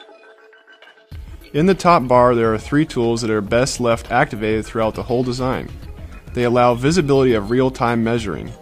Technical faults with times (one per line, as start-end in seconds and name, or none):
none